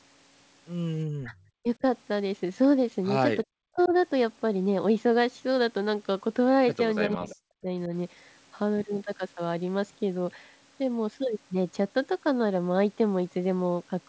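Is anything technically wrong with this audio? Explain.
Yes. The speech has two kinds of fault.

Speech suppressed in double talk occurs at 1.19–1.34 s, 1.62–1.83 s, 3.44–3.93 s and 7.09–7.92 s. While the far side talks, the echo canceller, likely unable to separate talker from loudspeaker echo, turns the voice down by up to about 40 dB (about 25 dB at 1.62 s). Unlike a network dropout, the voice dips and returns in pieces rather than stopping abruptly.

Echo leak appears at 3.79–3.89 s, 7.02–7.07 s and 7.3–7.35 s. These are short, faint scraps of the voice repeated 340 ms late, about 20 to 25 dB below the speech. This is likely residual loudspeaker pickup that the canceller missed. Unlike room reverberation, it is a distinct delayed copy rather than a smooth decay.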